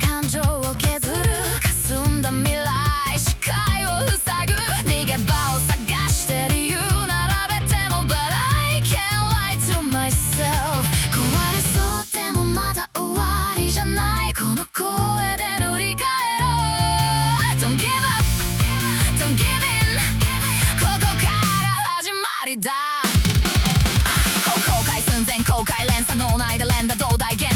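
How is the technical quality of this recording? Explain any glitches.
Nothing stood out on listening; I heard no glitches anywhere in the recording.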